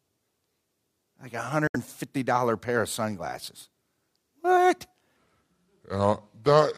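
A speech clip with two faults. Around 1.67 s, audio packets most likely failed to reach the headphones in time and were discarded, a Bluetooth dropout. The speech cuts to silence until 1.76 s, then resumes further along as though it had kept playing through the gap. From 5.17 s to the end, playback most likely ran against the wrong clock, giving a section at the wrong speed. The audio plays at 0.761 times its recorded rate, so the speech turns slow and drags, with its pitch dropping by roughly five semitones.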